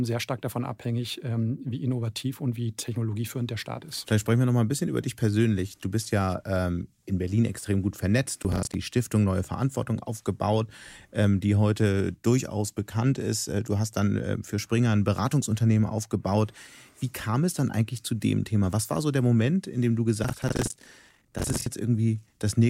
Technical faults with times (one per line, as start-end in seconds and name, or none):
8.43-8.75 processor overload crackle
20.23-21.66 processor overload crackle